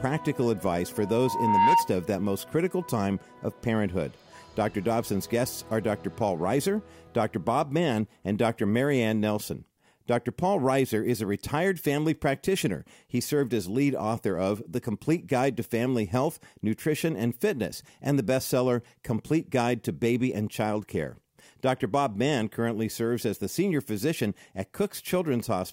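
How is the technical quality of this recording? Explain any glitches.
The recording has one clear fault, a loudspeaker feedback squeal early on. From 0.96 s to 1.93 s a steady tone near 925 Hz appears. It swells for most of a second and peaks about 10 dB above the surrounding sound, then stops. A microphone was picking up a loudspeaker it was feeding. At 925 Hz the loop gain went above one, so that tone fed itself and kept growing.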